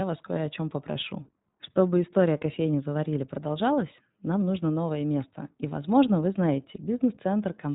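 From start to finish the speech carries iLBC codec damage that is plainly audible. The band stops sharply near 3.8 kHz, so sibilants lose their hiss and the sound turns thin and telephone-like. Each short block of excitation is coded on its own, which gives a rough, slightly synthetic buzz consistent with 20 ms frames at about 15.2 kbps. A spectrogram shows an empty region above 3.8 kHz with a flat top edge.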